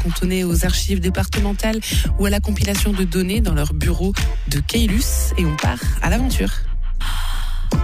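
Throughout the clip there is imaging from linear upsampling. The sound points to a conversion from about 22 kHz to 44.1 kHz done by straight-line interpolation between samples. That weak filter softens the top of the original band and leaves a mirrored copy of the spectrum between 11.03 and 22.05 kHz, roughly 25 dB under the main signal. On a spectrogram it shows as a faint inverted reflection above 11 kHz. It is heard as a thin metallic shimmer on bright, high content.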